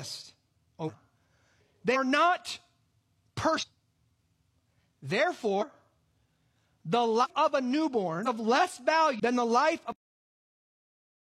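The speech jumps forward at 0.84, 1.91, 3.58, 4.51, 5.58, 7.20 (just before "of a"), 8.22 and 9.15 s. These are compressed frames skipped: whole blocks of roughly 46 ms audio are never decoded, so the sound leaps ahead by anything from about a tenth of a second to well over half a second. A spectrogram shows abrupt spectral discontinuities, and the waveform shows no gap.

At 9.92 s the audio has a cut-off end. The final buffers were never written, so the speech stops mid-sound and drops straight to digital silence for the remaining seconds. There is no decay tail. The waveform shows a sudden vertical stop into a flat line, and the spectrogram shows energy ending in a hard vertical edge and then blank.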